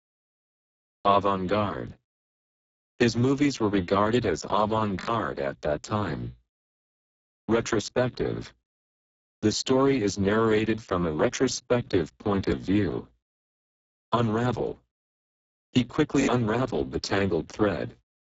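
From start to finish the speech carries heavy Speex codec damage. It sounds hoarse and noisy. Too few bits are left to model the excitation, so the voiced sound loses its natural body. The damage points to a very low bitrate of around 6 kbps. Nothing is heard above 7.7 kHz. The upper band is a thin, noise-like fill, not real detail.

At 1.88 to 1.92 s a repeated buffer is heard. Playback ran short of new audio, so the device played the last block twice more. The result is a short stutter with hard joins. Each repeat lasts 21.33 ms, which fits a 1024-sample buffer. At 4.99 to 5.08 s, after "were regarded as avant" and before "at that time", the same block sounds four extra times. This makes a longer stutter, and about a tenth of a second of audio goes missing. At 12.50 to 12.52 s, after "from a retrospective point", one extra repeat gives a brief stutter. At 16.21 to 16.28 s, three repeats produce another stutter.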